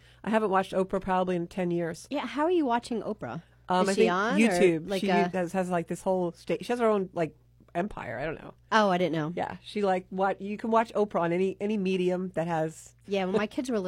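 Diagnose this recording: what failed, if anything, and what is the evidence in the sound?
Near the end, at 13.01 to 13.06 s, the speech jumps abruptly ahead with a brief blip; likely a stream segment skipped by the player after a failed network load.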